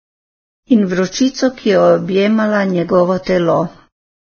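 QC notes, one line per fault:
Throughout, Vorbis compression: the speech sounds hissy and grainy, with nothing above 6.5 kHz. Attacks are blurred and tones roughened. This is likely heavy low-bitrate coding, near 14 kbps, where treble detail is quantised into noise-like fill of similar energy.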